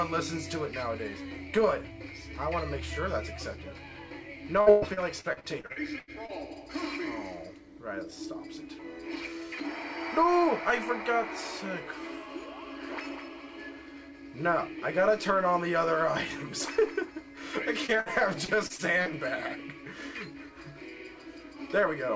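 From 4.61 s to 6.31 s the audio breaks up with repeated packet loss (robotic sound): a run of around a dozen dropouts, the longest about 123 ms. Roughly 0.53 s of this 1.7 s stretch is concealment, each hole patched by extending the preceding sound. Since the next gap follows soon after, the result is choppy, with pieces of the original missing.

At 17.86 s there is a short concealed packet loss of roughly 30 ms. The receiver extends the last sound across the hole and blends back into the real signal, leaving a brief smear or wobble.

From 18.00 s to 18.09 s a burst of packet loss removes about 60 ms. The concealment stretches the final sound before the gap and fades it as the gap continues, producing a held buzz or fading hiss. Playback then resumes further along, and the material in between is gone.

Repeated packet loss returns from 18.45 s to 19.09 s, this time lighter. There are about five gaps, none longer than about 30 ms, with roughly 19% of the span filled in. 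It is audible as a brief choppy patch. Across the whole clip the band stops at 8 kHz, which points to G.722 at 64 kbps on the call path.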